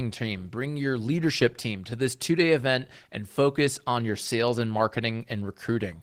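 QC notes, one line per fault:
Throughout: Opus voice compression. The speech has a hoarse, slightly robotic edge, and sounds muffled. The upper range sounds thin and approximate rather than cut off. This fits Opus in hybrid mode at around 16 kbps. A linear-prediction coder carries the band below 8 kHz, with its excitation quantised coarsely, and a sparse transform layer covers the top band, so fine detail is lost across the spectrum.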